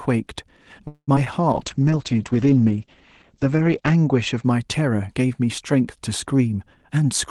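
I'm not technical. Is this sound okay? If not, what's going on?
No. This speech sounds like it came through an online call with a few hiccups.

From 0.87 to 1.10 s there is a call audio freeze. The sound stretches out, then goes briefly silent, then picks up where it stopped. Nothing is lost. The likely cause is delayed data, so the speech arrives a fifth of a second late.

Right after, at 1.16 s and again at 1.24 s, there is short concealed packet loss. Two tiny bits of audio went missing. The call filled each hole with a guess, so you hear a quick smear or wobble.

From 1.54 to 4.50 s there is a call bitrate drop. The connection squeezed the sound into much less data. The speech turns rougher and duller, losing its crisp top end, above 8 kHz, until it recovers.

From 6.48 to 7.05 s there is a jitter buffer speed-up. The call trimmed tiny slivers, about a twenty-fifth of a second in all, to catch up. 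The speech runs about 6% faster at the same pitch, sounding slightly hurried.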